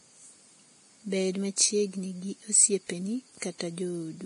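The speech was most likely passed through a low-bitrate codec before being saved again as a high-bitrate MP3, a case of low-bitrate audio saved at a high bitrate. The later, generous encoding cannot rebuild what the first pass threw away, so from start to finish nothing is heard above about 10.6 kHz, and the dulled top end and coding smear of that earlier stage remain, which fits a first encoding somewhere near 30 kbit/s.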